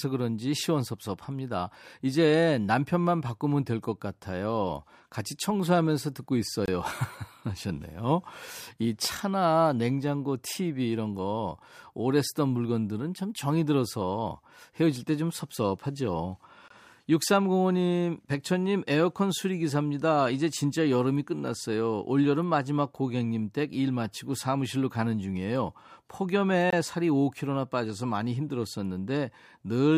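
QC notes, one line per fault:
6.66–6.68 s, 16.68–16.70 s and 26.70–26.73 s: gap between chunks. The speech is carried in 10-second chunks, and a silence of about 23 ms sits at each join. Nothing is lost, but each join leaves a short hole in the sound.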